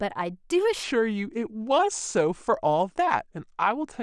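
At 0.83 s the speech suddenly slows, and it stays slow to the end. This is a section at the wrong speed. From that point the audio runs at 0.82 times its proper rate. Pitch and tempo drop together, so the voice sinks by about three semitones and drags. The change is abrupt, not gradual. The likely cause is playback or editing against the wrong clock, which stretches everything after the switch.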